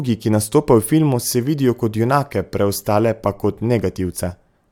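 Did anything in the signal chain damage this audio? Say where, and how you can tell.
No, nothing in the signal chain stood out as having damaged this audio when listening to it.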